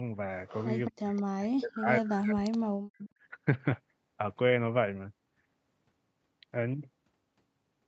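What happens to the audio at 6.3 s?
Nothing goes wrong at 6.3 s: the speech there is intact, carrying only the ordinary character of the call path, with its content limited to about 8 kHz.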